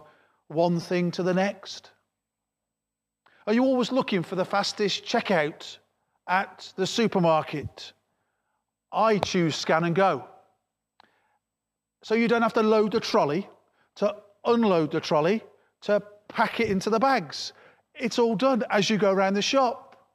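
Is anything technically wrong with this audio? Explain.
Yes. There is a repeated buffer fault at 0.82 s before "thing to the next", at 13.12 s after "have to load the", and at 16.50 s between "unload the trolley to" and "it into the bags". Late data made the device replay a block of roughly 5 ms two or three extra times. Each repeat is heard as a brief click or buzz.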